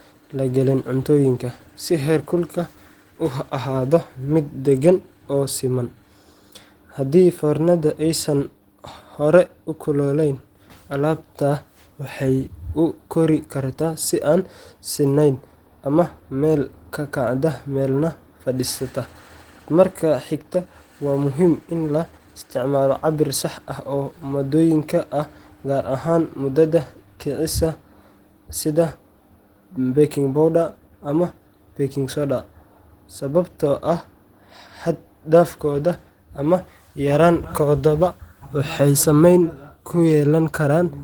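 Opus voice compression runs throughout the speech. The codec works in hybrid mode, with linear prediction below 8 kHz and a transform layer above, reaching 20.1 kHz. The excitation is coded coarsely, which fits about 16 kbps, so plainly audible hoarse, slightly robotic roughness results.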